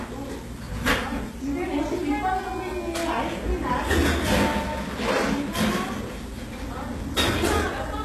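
From start to finish, the treble sounds bright but synthetic, with gritty, metallic high detail and nothing above about 12.3 kHz. This is likely HE-AAC compression at a very low rate, near 16 kbps, rebuilding the top by copying lower bands upward. Unlike plain low-pass filtering, the treble isn't dulled.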